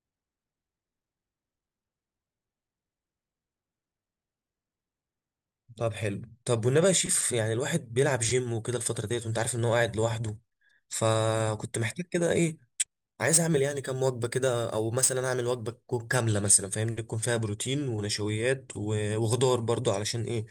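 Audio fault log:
12.97 to 16.15 s, sample clock jitter: for these three seconds or so the speech picks up a gritty hiss that rides on the sound itself, getting rougher on loud and bright syllables and dropping away in the gaps. The converter's clock is wandering by a few microseconds, so each sample lands a touch early or late, and the steeper the waveform, the bigger the error. It sits only about 20 dB under the signal.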